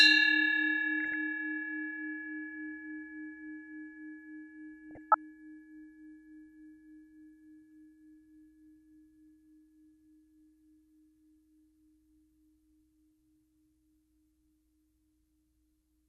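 Bit-starved sub-band coding, likely MP2 compression at a rate that points to around 80 kbps, runs through the whole clip. Upper bands are switched off and the remaining ones coarsely quantised, so the sound is dull and carries a plainly audible gurgling, granular texture.

At 1.00 to 1.14 s and again at 4.91 to 5.15 s, DAB burbling appears. Bit errors slipped past error correction into the audio data, putting short blips of noise into single sub-bands. It sounds like brief blips of noise.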